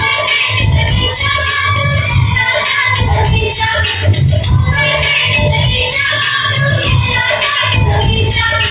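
No technical faults are audible.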